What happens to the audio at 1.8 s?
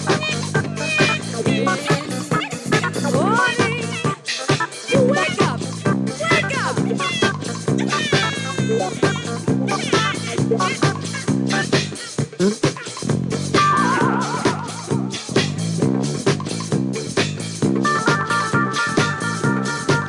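From 1.79 s to 3.16 s the audio plays with a wrong sample rate. It runs about 1.09 times too fast and sits 1.47 semitones higher, which fits audio recorded at 22 kHz being played at 24 kHz without conversion. The sound turns slightly high and hurried. Unlike a pitch shift or a time stretch, which change pitch or tempo on their own, here speed and pitch rise together by the same ratio.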